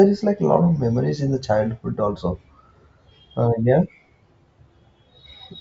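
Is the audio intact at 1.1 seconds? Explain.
Yes, the speech at 1.1 seconds plays through cleanly, with no dropout, click, distortion or other fault at that moment.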